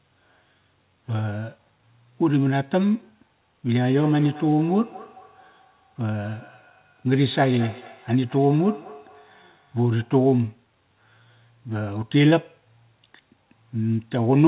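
Feedback echo between two devices, 3.87 to 10.25 s: another device's playback re-enters this microphone, returning speech roughly every fifth of a second, ringing, about 19 dB down.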